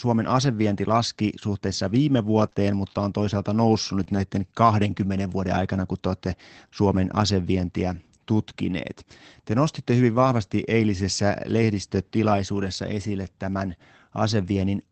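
Between 2.37 and 4.17 s, just after "asevienti laski suhteessa viime", the sound picks up a few brief ticks and small smeared hiccups, maybe three in all, each short, the longest around 30 ms. These are scattered short gaps: audio packets went missing one at a time, about 60 ms in total, and the receiver covered each hole by stretching the preceding sound, with roughly 120 ms reworked. Only a small fraction of the stretch is affected.

From 10.15 to 10.25 s, after "nostitte hyvin" and before "eilisessä lehdistötilaisuudessa esille tämän", there is no dropout, but about 60 ms turns rougher and noisier than the surrounding audio. This is a lost packet rebuilt from error correction. The pattern points to around three separate lost packets. Each was replaced from a low-bitrate backup copy carried inside the next packet, so the decoder filled the time with a coarser version instead of silence. 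The call path's Opus coding, which sounds like roughly 24 kbps with content reaching up to 8 kHz, sets the top of the band there as well.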